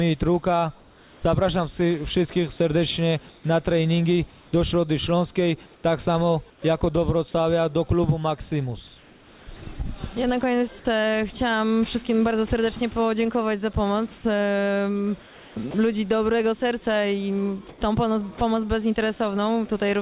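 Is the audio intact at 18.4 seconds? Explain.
No. From 17.69 to 18.41 s, the sender likely stopped transmitting during a pause, and the receiver filled it with comfort noise in place of the background, a steady, featureless hiss instead of the real ambience. From 18.38 to 18.41 s, the voice detector likely misjudged the sound as background and dropped it, so about 30 ms is lost under that same flat noise before the sound resumes.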